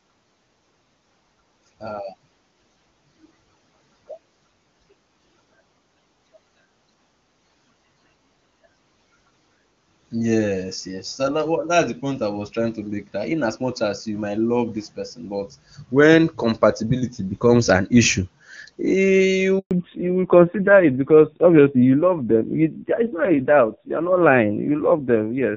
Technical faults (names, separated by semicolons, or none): handover gap; fallback to narrowband